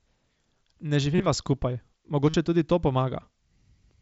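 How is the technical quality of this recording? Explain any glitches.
Two short glitches break up the speech, both from concealed Bluetooth headset packet loss. From 1.15 to 1.26 s the sound turns briefly buzzy and held, as if frozen, with a slight warble as normal speech resumes. At 2.29 to 2.34 s a shorter buzzy patch appears. Voice packets from the headset never arrived, so the phone filled each gap by repeating the closest-matching recent stretch of waveform. The first patch covers roughly 70 ms of losses spread over about 105 ms, its longest unbroken gap 30 ms. The second covers about 45 ms. The speech is band-limited to about 8 kHz, which fits the mSBC wideband headset codec.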